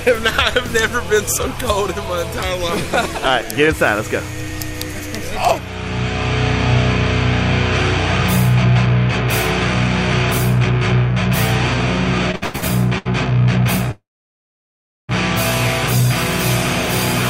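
From 12.31 to 13.07 s there are repeated stalls (stutter). Five short gaps, the longest 103 ms, stretch the last sound. The audio drags but nothing is lost.

At 13.91 s a call audio freeze begins. The sound briefly continues, then goes silent for about a second before resuming at 15.11 s. Late packets likely emptied the jitter buffer.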